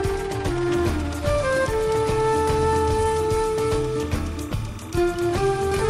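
From 0.69 s to the end of the clip, a timecode bleed sits behind the sound: linear timecode from a neighbouring track or cable has leaked into the audio path. Its square-wave code flips between two pitches near 1 kHz and 2 kHz, giving a steady chirping warble about 25 dB below the programme, with a rhythm that fits 29.97 frame-per-second code. That two-pitch, frame-paced pattern separates it from a single fixed-pitch whine or hum.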